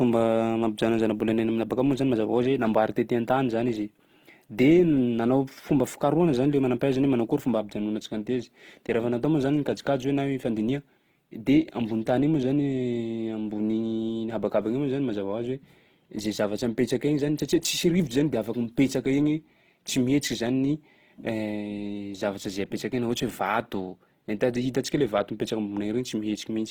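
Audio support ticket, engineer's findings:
Speech grainy, rough and noisy throughout the clip. Likely Opus compression (CELT mode) starved of bits, filling bands with folded or noise content. Fits about 16 kbps. Bandwidth intact to 20.2 kHz.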